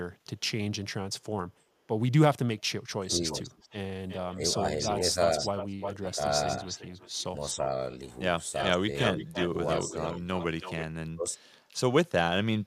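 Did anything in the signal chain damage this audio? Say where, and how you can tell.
Yes. The damage is in call processing. Speech suppressed in double talk shows up as dips in the speech level at 2.99–3.33, 4.35–5.16, 5.99–6.67, 7.54–7.7, 8.67–10.24 and 11.1–11.41 s. The deepest cuts are about 25 dB at 3 s and 9 s and about 35 dB at 11.1 s, with shallower dips of about 5 to 10 dB in between. The likely cause is an echo canceller that could not tell near speech from far-end echo while both sides talked, so it attenuated everything.

An echo leak from the same processing stage runs from 3.09 to 7.59 s and again from 8.53 to 10.85 s. A delayed copy of the speech trails the original by 353 ms in the first stretch and by 326 ms in the second. It sits about 10 dB below the direct speech at first and about 5 dB below later. Loudspeaker sound likely reached a microphone on the loudspeaker side, and that side's echo canceller did not remove it fully before sending it back.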